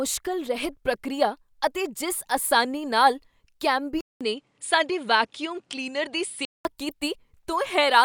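Input switched to a poorer device, 4.01 to 6.65 s: a 200 ms gap, then speech dulls with nothing above 10.5 kHz, likely another microphone.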